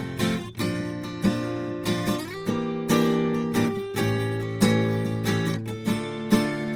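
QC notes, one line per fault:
throughout: Opus compression. The music has a plainly audible grainy, rough texture, and its tones turn noisy instead of swirling. That texture is likely the result of the encoder's music (CELT) mode running short of bits, as at a rate near 24 kbps, and filling bands with folded or noise-like content. Bandwidth stays full, reaching about 20.2 kHz. On a spectrogram the upper bands look speckled and evenly filled rather than holed, and the harmonics lose their clean, sharp lines.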